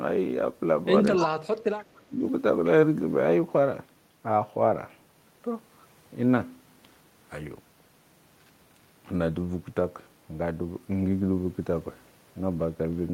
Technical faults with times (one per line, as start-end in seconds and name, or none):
1.16-1.26 echo leak
1.17-1.37 speech suppressed in double talk
1.78-1.98 echo leak
1.97-2.22 speech suppressed in double talk